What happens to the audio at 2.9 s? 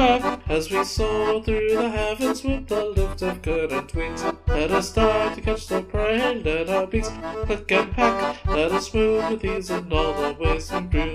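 Nothing goes wrong at 2.9 s; the audio runs on intact through that moment with no break or fault to be heard.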